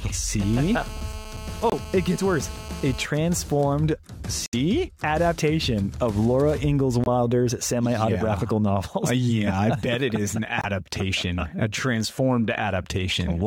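From 0.4 to 3.06 s the audio carries a GSM phone buzz: a hard, raspy tone at 217 Hz with dense harmonics, about 17 dB below the signal and nearly steady, as a phone in a call pulses its transmitter and the audio circuit rectifies it. Its 217 Hz rate and gritty texture set it apart from smoother 50 or 60 Hz mains hum. Four short silences, at 1.70 s (42 ms), 4.46 to 4.55 s, 7.04 s (36 ms) and 10.61 s (42 ms), are likely Bluetooth dropouts from packets that failed to arrive in time. Each gap fits one or three lost frames. Unlike an edit or skip, the sound resumes as if it had kept playing underneath.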